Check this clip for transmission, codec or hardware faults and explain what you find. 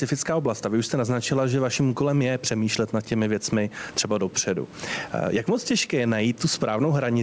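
One fault runs through the whole clip: gain pumping. The input gain is likely set far too high, so a fast limiter pulls the level down on every loud syllable. The gain swings by around 15 dB, leaving the speech squashed. The missing content above 8 kHz fits the G.722 call codec's band limit.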